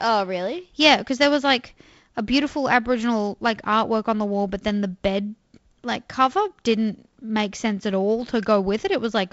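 No technical faults can be heard in this speech recording. The sound carries the signature of G.722 wideband telephone coding, consistent with its 48 kbit/s mode, with nothing above about 7.8 kHz and only a light coding grain.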